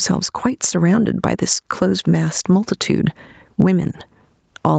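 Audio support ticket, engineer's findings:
Gain pumping, throughout: loud and soft parts squashed closer in level, a gain swing of around 15 dB. Likely cause: mic gain far too high, with a fast limiter clamping each peak. Band tops out at 8 kHz, consistent with Opus at about 40 kbps.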